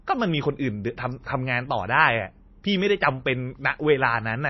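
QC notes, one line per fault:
Throughout, MP3 compression: the speech sounds watery and swirly, with smeared consonant attacks and nothing above 5.8 kHz, so sibilants come out dull and blunted. This points to a low-bitrate MP3 encode, likely around 24 kbps, with weak frequency lines dropping in and out between frames.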